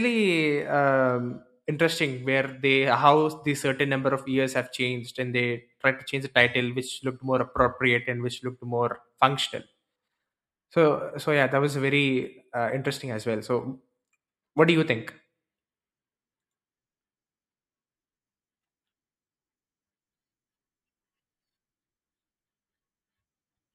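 No technical faults can be heard anywhere in this speech recording.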